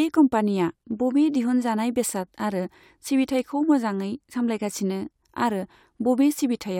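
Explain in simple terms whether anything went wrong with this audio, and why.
Nothing went wrong here; the speech comes through steadily the whole way, with no dropouts, glitches or odd noises to point to.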